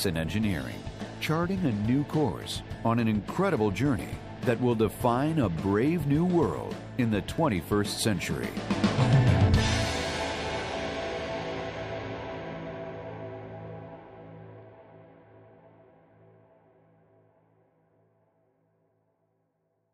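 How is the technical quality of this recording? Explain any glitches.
Two brief glitches interrupt the recording, at 4.09 s and 7.38 s. Each is a tick where the audio drops out for an instant and snaps back. Both are blocks of digital silence: runs of samples replaced by zeros, likely because the output buffer wasn't filled in time. The first gap lasts about 1.45 ms, which fits a 64-sample block, and the second about 2.9 ms, fitting 128 samples. The abrupt cut to zero and back causes the clicks.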